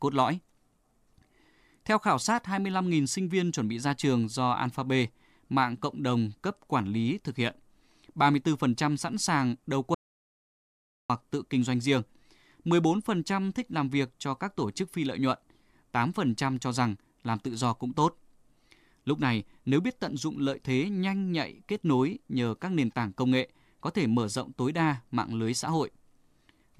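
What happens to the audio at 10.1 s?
An audio dropout to silence runs from 9.94 s to 11.10 s, so 10.1 s falls inside it. The speech cuts off abruptly mid-flow and the signal drops to silence, with no room tone or background underneath, for about 1.15 s before the speech resumes just as suddenly. The likely cause is a brief loss of the input, such as a disconnected device, a failed link or a stray mute, while recording continued writing silence. Whatever was spoken during that gap is lost.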